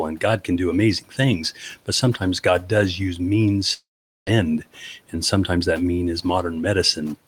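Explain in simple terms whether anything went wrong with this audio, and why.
Just after "can do", from 1.01 to 1.19 s, a bit of speech goes faint and swallowed for about a tenth of a second. This is speech cut by the noise suppressor: the filter meant to remove background hum mistook part of the speech for noise and turned it down.

At 3.73 s the sound turns into a brief fading buzz and then near silence lasting almost half a second, until 4.29 s. About half a second of speech never arrives. This is most likely a long network dropout: the connection stopped delivering audio, the receiver briefly stretched the last sound, and then it had nothing left to play.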